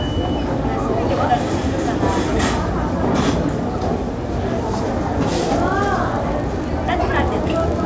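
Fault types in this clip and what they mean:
Resampler restarted on every block: each 40 ms chunk is converted separately, so edge errors give a 25 Hz ticking buzz from 5.52 s onward, likely a 44.1-to-16 kHz conversion.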